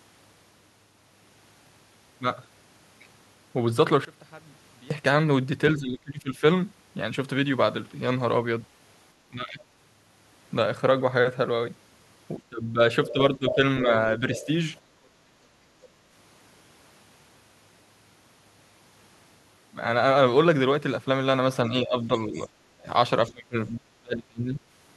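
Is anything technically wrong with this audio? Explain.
Yes. From 4.05 to 4.91 s the speech drops by about 24 dB, leaving a faint copy, which likely means one channel inverted: opposite polarities cancel the shared centre when summed to mono. Unlike a plain level drop, the shared sound nearly vanishes and only a faint residue of the mismatch between channels remains.

Speech suppressed in double talk shows at 5.78 to 6.43 s, 9.28 to 9.60 s, 12.38 to 14.48 s and 21.70 to 24.62 s. The talker dips by roughly 15 to 35 dB, deepest in the last stretch. The likely cause is an echo canceller that could not separate near and far speech, so it turned both down. The dips follow the overlap rather than the talker's own pauses.

The other side's voice leaking through appears at 13.08 to 13.55 s, roughly 10 dB under the talker, and briefly at 14.35 to 14.46 s, about 15 dB under. It is a second voice, likely loudspeaker sound the echo canceller failed to remove. 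Unlike the suppression, it adds sound rather than taking it away.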